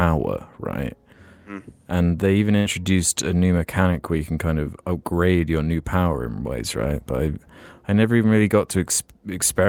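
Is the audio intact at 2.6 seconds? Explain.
No. From 2.57 to 2.67 s a burst of packet loss removes about 80 ms of speech; the receiver stretches the last sound for about 78 ms, fading it, then jumps ahead. Unlike a plain dropout, the gap is a fading held sound rather than silence.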